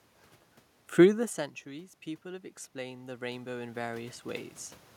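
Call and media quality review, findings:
Automatic gain falling, 0.87–1.76 s. AGC read the input as too loud or its background noise as too strong and pulled its gain down by about 4 dB over roughly 0.9 s. Sound sinks gradually rather than stepping, with the room noise dropping by the same amount, so the change comes from the capture chain and not the source.

Automatic gain rising, 1.71–4.55 s. Input level fell by about 16 dB around 1 s, consistent with the talker moving away from the mic. AGC compensated by raising gain about 10 dB over nearly 3 s. Voice and room noise swell together, so the background climbs too, and the level is still about 10 dB short of where it started.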